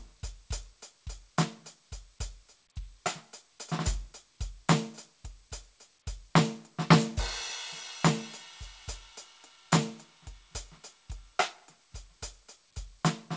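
Music over a call path whose band stops at 8 kHz, which fits a wideband codec such as G.722; no faults heard.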